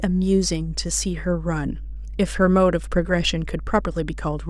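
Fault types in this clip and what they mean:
Mains hum: a steady low drone sits under the speech for the whole clip, pitched at 50 Hz and strong, only about 10 dB below the speech itself, so it stays plainly audible even while someone is talking. It comes from the power line leaking into the signal, most often through a ground loop between connected pieces of equipment or from a transformer close to the cabling or microphone.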